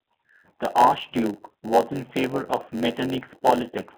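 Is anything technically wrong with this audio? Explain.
Yes, two things are going on, and both run through the whole clip.

First, it's been through a G.729 codec at 8 kbit/s, and the damage is plainly audible. The codec keeps only a vocal tract filter, a pitch estimate and a few pulses per frame, then rebuilds the speech from those, so it comes out rough and a bit synthetic. The band sits roughly between 200 Hz and 3.5 kHz like a phone line, with nothing above 4 kHz.

Second, there's a block size mismatch (padded). One stage hands over blocks about 92% the size the next stage expects, and the shortfall in each block is filled with zeros. That puts a tiny silent gap into every block, which you hear as a buzz at about 92 Hz. The padding also stretches everything, so it plays at 0.919 times normal speed while the timbre stays the same.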